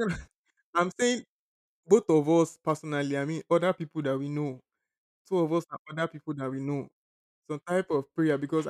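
No technical faults can be heard anywhere in the speech. Nothing in the recording calls for a timestamp or a repair.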